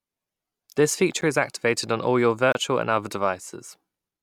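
A speech clip with two blocks of digital silence. The first, at 1.21 s, lasts 10 ms and is heard as a tick. The second runs from 2.52 to 2.55 s, about 27 ms, and opens a short hole. Each cuts out abruptly and back. Such gaps point to the output buffer not being filled in time.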